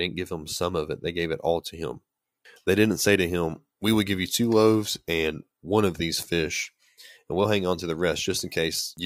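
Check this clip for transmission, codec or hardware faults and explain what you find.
Nothing in this speech recording points to a fault. There is no event in it that needs a time or a mechanism to explain.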